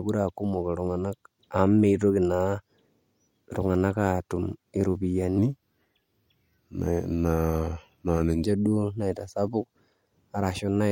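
A section at the wrong speed runs from 5.38 to 8.45 s in this speech clip, playing at 0.878 times normal rate, so the voice drops about two semitones and drags, then snaps back. The likely cause is that stretch being clocked at the wrong rate during editing or playback.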